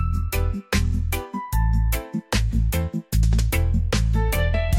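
No dropouts, glitches, distortion or level faults are audible anywhere in the clip.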